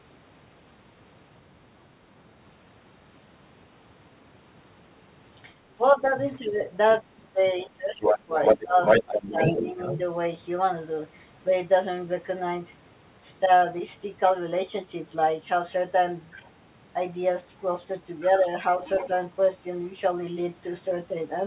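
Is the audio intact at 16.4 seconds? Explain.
No. From 16.35 to 16.5 s the other side's voice leaks through: a brief scrap of a second voice sits faintly under the main speech, roughly 25 dB down, sounding band-limited like the rest of this narrowband call audio, with nothing above 4 kHz. The likely cause is residual echo: the far end's audio played from the loudspeaker reached the microphone and the echo canceller did not fully remove it.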